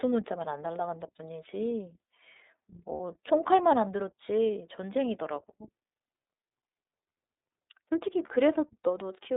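The whole recording passes through the iLBC codec. Everything outside roughly 300 Hz to 3.7 kHz is missing, which fits the 13.33 kbps mode with 30 ms frames. Coding each frame independently leaves plainly audible roughness and a synthetic edge. A spectrogram shows a hard ceiling near 3.7 kHz with blurred harmonics.

From 2.94 to 3.00 s come lost iLBC frames, a 60 ms gap that fits two missing 30 ms frames. The decoder fills it by repeating the last pitch cycle mixed with noise, which sounds like a short, buzzy held vowel. The waveform shows repeating, noise-mixed cycles there, and the spectrogram shows flat, smeared harmonics before clean speech resumes almost immediately.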